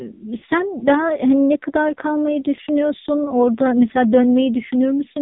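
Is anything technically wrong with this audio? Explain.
Yes, there are two problems. Throughout, the speech carries heavy AMR narrowband mobile codec damage. The vocal tract model and sparse pulse excitation give a buzzy, synthetic voice, and the harshness fits a low mode near 5.9 kbps. On a spectrogram, everything above 4 kHz is simply empty.

Lost AMR speech frames occur at 0.38 to 0.44 s (about 40 ms) and at 2.56 to 2.59 s (about 20 ms). The decoder repeats the last pitch and spectral settings at falling gain, so each gap is a brief smeared dip. The waveform sags there and the spectrogram briefly shows frozen, fading harmonics.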